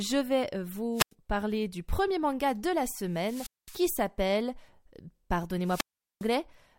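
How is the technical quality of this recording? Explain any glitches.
The recording is marred by three wireless microphone squelch dropouts. They fall at 0.93–1.12 s, just before "parler du premier manga", with about a 93 ms mute; at 3.10–3.95 s, right after "premier manga de la", with a 215 ms mute; and at 5.62–6.30 s, with a 405 ms mute. Each time the analogue FM radio link fades, hiss swells, and the receiver's squelch cuts the output to near silence before the speech returns. On a spectrogram this appears as a broadband haze followed by a blank vertical gap, and on the waveform as a brief noisy fuzz before a flat line.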